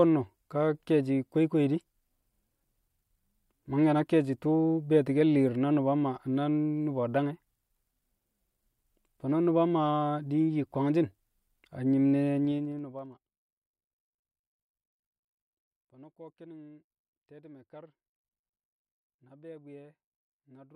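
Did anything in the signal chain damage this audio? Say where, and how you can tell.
Yes. Zipper noise appears in the gain stage, at the driver or buffer level, from 12.35 to 13.44 s. The speech drops by roughly 25 dB there. A fast ticking rides on it the whole way down, at around 15 ticks per second. Each tick is a 2 dB jump applied all at once, with no smoothing between steps. Every jump puts a small discontinuity in the waveform, so the fade sounds like a zip.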